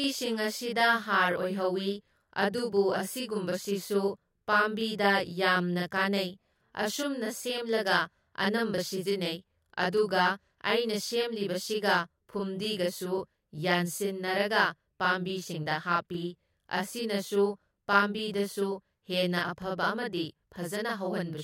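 From the first second to the end, the speech carries a channel delay (doubling): one side of the stereo pair runs about 40 ms behind the other, and when the two get folded down to mono you hear both copies at equal strength. At 40 ms the late copy doesn't blend in as thickness. It sits just apart, so every syllable gets a quick slap right behind it, a hollow doubled edge that never lets up.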